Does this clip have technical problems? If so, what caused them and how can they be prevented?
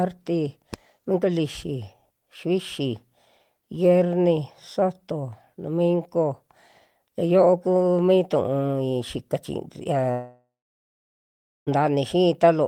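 Yes. A long network dropout likely cut off the incoming stream for about 1.56 s, from 10.11 to 11.69 s, just after "mi tu'ui xika chi". With no packets arriving, the receiver stretched the last sound into a fading buzz or hiss. After a few tenths of a second, about 1.2 s of near-silence remains before the speech resumes further on, with the lost portion simply gone. A steadier connection, such as wired rather than congested wireless, together with forward error correction and a larger jitter buffer, would help prevent this.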